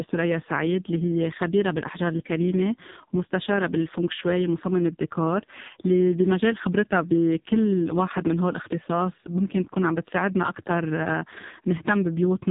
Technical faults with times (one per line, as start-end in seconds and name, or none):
0.00-12.51 AMR narrowband mobile codec